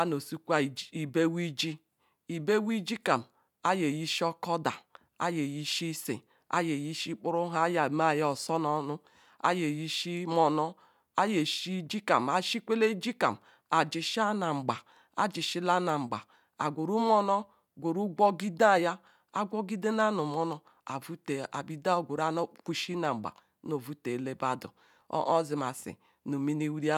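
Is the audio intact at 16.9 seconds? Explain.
Yes, the speech at 16.9 seconds is intact, with no dropout, click, distortion or other fault.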